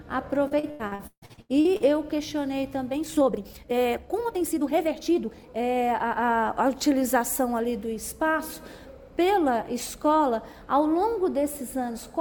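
Repeated packet loss (robotic sound), 0.47 to 1.83 s: eleven dropouts up to 149 ms are patched by repeating prior sound, leaving it choppy.

Time-stretched section, 2.88 to 5.46 s: pace jumps to 1.81 times with pitch unchanged, rushed, likely software dropping short pieces to shorten it.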